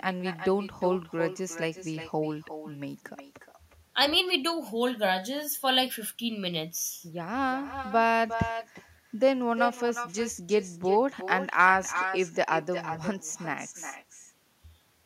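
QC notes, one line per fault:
Throughout, echo with no canceller: every phrase of the speech is trailed roughly 0.4 s later by a quieter copy, about 9 dB below the original, sounding thinner. The far end is playing the call through a loudspeaker, its microphone picks that playback up, and nothing subtracts it before sending it back, so the talker's own voice returns after the network round trip, coloured by the loudspeaker.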